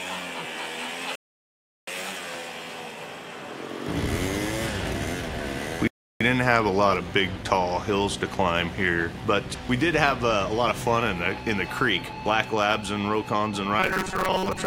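At 1.15 s the audio drops into silence for about 0.72 s and picks up again at 1.88 s. That's a rebuffering stall: the player used up what it had downloaded and simply waited for more data. When the sound resumes, it continues exactly where it left off, so nothing goes missing and the clip just gets longer. The same thing happens again at 5.87 s, this time a shorter gap of about 0.33 s, ending at 6.21 s.

From 13.80 s to the end, the sound turns into a stiff, metallic buzz pitched at 188 Hz. It still roughly tracks the shape of the audio underneath. This is robotic sound from repeated short buffers, and the likely cause is data arriving too slowly, so the software keeps looping the last chunk it received. The 188 Hz pitch fits a chunk of about 5.3 ms being repeated over and over, and roughly half of the real audio in that stretch gets skipped while the loop plays.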